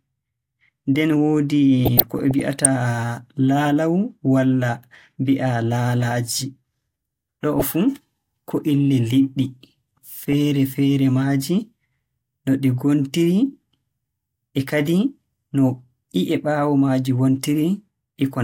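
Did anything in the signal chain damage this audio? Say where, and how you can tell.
Yes. The damage is DAB burbling at the codec stage, from weak digital radio reception. It comes as short noise blips and sub-band level jumps over the speech from 1.85 to 2.66 s, briefly at 7.53 to 7.62 s, and again at 10.31 to 10.33 s. Bit errors at a fraction of a percent slipped past error correction into the MP2 data, so corrupted samples put short blips of noise in single sub-bands and corrupted scale factors make sub-bands jump in level for up to a frame. Network packet loss would instead drop or smear whole blocks of audio.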